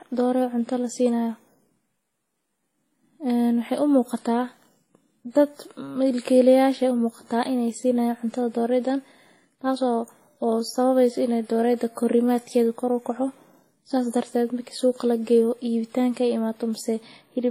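Across the whole 17.5-second speech clip, the sound carries layered compression damage, with nothing above 16.2 kHz. It is likely transcoding between lossy codecs: the artefacts fit an early 32 kbit/s WMA pass, and a later 52 kbit/s Vorbis stage and a final 32 kbit/s HE-AAC encode each spend bits re-coding that damage while adding their own. Single-codec compression has one consistent artefact texture; here, differently flavoured artefacts sound together.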